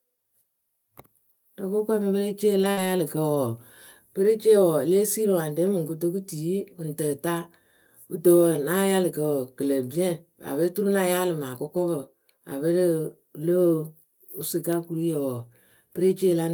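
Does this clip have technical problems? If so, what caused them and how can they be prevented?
Yes. Five lost packets were rebuilt from error correction, at 2.63, 2.77, 2.83, 3.35 and 3.47 s, each 20 ms long. At each one the decoder played the low-bitrate copy that the following packet carried, so nothing drops out, but the speech turns briefly rough and noisy. On a spectrogram each shows as a thin 20 ms column with smeared harmonics. Raising the redundancy or bitrate of the error-correction copy, or reducing network loss, would prevent this.

A burst of packet loss runs from 2.71 to 2.87 s. The receiver stretched the last sound over about 55 ms, so a voiced sound becomes a held buzz and anything else a fading hiss. About 60 ms of the speech is skipped. The waveform shows a decaying, repetitive stretch followed by an abrupt restart, and the spectrogram shows a frozen spectrum that fades out. 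A larger jitter buffer and a steadier connection would prevent it.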